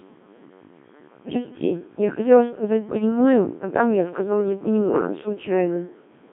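It's speech squeezed through the Codec 2 vocoder, buzzy and robotic within a 200 Hz to 3.5 kHz band, consistent with roughly the 1.3 kbit/s mode, the voice rebuilt from sine waves. Between 2.96 and 3.04 s, bit errors on digital voice radio, around a couple of percent, knock a few frames into a brief warbling pitch-and-level jump.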